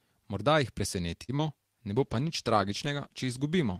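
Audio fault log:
1.23–1.31 s: short stall from a late packet. The jitter buffer ran dry, so the sound is held about 51 ms and slightly buzzy, then resumes with nothing lost.
1.37–1.41 s: short concealed packet loss. About 20 ms never arrived in time. The decoder extrapolated the preceding sound to fill it, leaving a brief smear before blending back.
1.94 s to end: call bitrate drop. The encoder rate fell from 32 to 15 kbps, bottoming out for 1.39 s, so coarser coding makes the sound rougher and duller.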